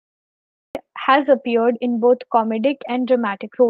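This speech clip shows a cut-off start: the recording or stream began late, so the first 0.75 s is digital silence and the speech enters abruptly at 0.75 s, partway through a sound, with no natural attack or fade-in. Near the end, between 2.88 and 3.70 s, the clip has scattered short gaps, where a handful of packets were lost or arrived late. Roughly five small holes, none longer than about 10 ms and totalling around 40 ms, were patched by continuing the preceding sound. That stretch stays largely intelligible but picks up brief ticks and slight smears. The audio came through a call path using the Opus codec, with its content limited to about 8 kHz.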